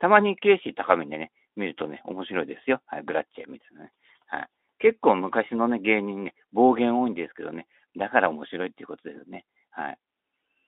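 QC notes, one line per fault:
Nothing stood out on listening to this speech clip.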